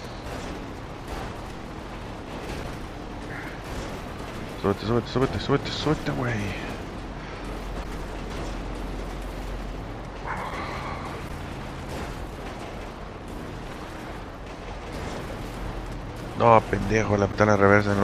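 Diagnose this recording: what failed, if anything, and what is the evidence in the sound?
Three brief glitches break through the sound, at 7.80 to 7.86 s, 11.25 to 11.30 s and 17.28 to 17.34 s, each lasting roughly 55 ms. This is damaged data in a compressed stream, a fault at the codec or storage stage. Corrupted bytes in the encoded file made the decoder misread those frames and lose sync, so it produced garbage output until it locked onto the next valid frame header.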